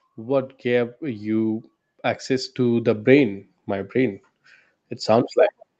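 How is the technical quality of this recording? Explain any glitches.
The recording has one audible fault, an automatic gain rise at the start. It passes through a call path, so nothing is heard above 8 kHz.

From 0.05 to 3.11 s, automatic gain rising lifts the level by about 10 dB. The control judged the input too quiet and raised the gain slowly. Speech and background swell together.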